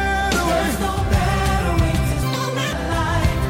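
From 2.23 to 2.73 s the audio is read two samples at a time (double speed): paired samples become single frames, so playback runs 2.0x fast, an octave up.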